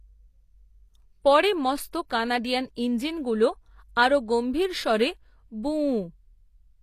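From start to finish, the speech carries plainly audible coding damage, likely HE-AAC compression at a low bitrate in the region of 24 kbps. The upper band is synthesised by copying lower spectrum upward, so s sounds come out gritty and metallic rather than simply dull, and nothing remains above about 14.9 kHz. Plain low-pass filtering would only darken the treble; here it stays bright but its harmonics fail to line up with the band below.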